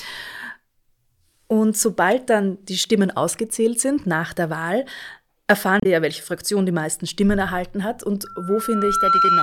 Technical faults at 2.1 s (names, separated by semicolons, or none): damaged data in a compressed stream